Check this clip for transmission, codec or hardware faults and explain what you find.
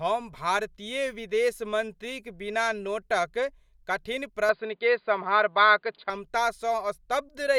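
One fault is present. From 4.49 to 6.10 s the speech suddenly loses everything above 4.8 kHz, turning dull and boxy, with a level shift of around 5 dB and a faint new noise floor underneath. There is no gap at either transition. This points to an input switched to a poorer device, likely a fallback microphone or headset call profile whose narrower passband and own gain and noise replace the original capture path until it returns.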